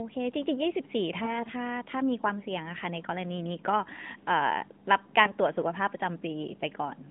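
From 1.24 to 1.42 s the speech smears into a drawn-out, fading sound before returning rough, and at 5.24 to 5.32 s a briefer dip or warble appears. These are lost AMR speech frames. The decoder repeated its last good pitch and vocal tract settings at falling gain, which fits 40 ms, then 20 ms, of corrupted frames.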